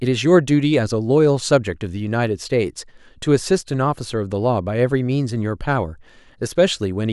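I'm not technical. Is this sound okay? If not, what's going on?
No, there are two sharp little clicks in the speech, at 2.14 s and 6.43 s. Each is likely dropped samples: a tiny sliver of audio goes missing, so the sound jumps abruptly.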